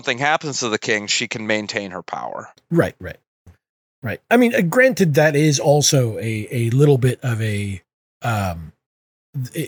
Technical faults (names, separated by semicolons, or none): none